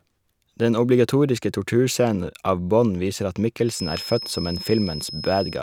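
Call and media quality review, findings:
Feedback whistle from 3.63 s to end of clip, after "viser at". Thin steady tone at 5.2 kHz, roughly 15 dB below the speech, level swelling and fading slowly. Likely cause: loudspeaker-to-microphone loop held at the edge of oscillation, sustaining one frequency without runaway.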